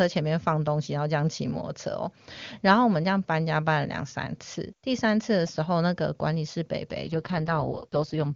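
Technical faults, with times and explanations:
7.04–8.35 s, AMR rate drop: from 7.04 s to the end of the clip the speech turns rough, raspy and synthetic. This points to the AMR-WB link stepping down from its top rate, near 23.85 kbit/s, to the lowest, about 6.6 kbit/s, spending bits on error protection on a weak radio link. Unlike a narrowband fallback, the bandwidth stays the same, and unlike packet loss, there is no gap.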